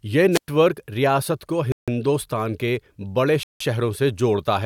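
At 0.31 s a wireless microphone squelch dropout occurs: the FM signal fades, hiss rises, and the receiver mutes the speech for 107 ms before it returns at 0.48 s. At 1.72 s and 3.43 s the audio cuts to silence for 157 ms and 171 ms and then resumes, likely a Bluetooth stall where the headphone buffer ran dry.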